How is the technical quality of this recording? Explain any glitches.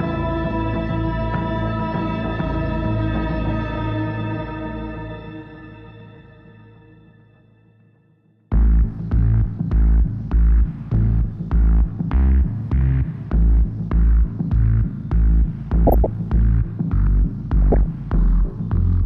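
The recording has two short bursts of DAB burbling near the end, at 15.87 to 16.06 s and at 17.62 to 17.86 s. Weak reception let bit errors of a few tenths of a percent pass the error correction into the MP2 data. Corrupted samples put short blips of noise into individual sub-bands, and corrupted scale factors throw sub-bands up or down in level for up to a frame, producing burbling over the sound for roughly a fifth of a second each time.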